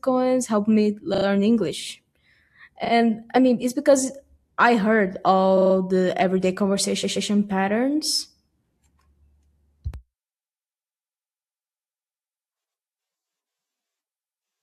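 Repeated frames stutter at 1.13 s after "helped me", 2.84 s before "I mean it's because", 5.57 s, and 7.03 s after "the everyday": a short block of coded audio plays again two to four times. The clip grows longer rather than losing any sound, which sets this apart from a dropout.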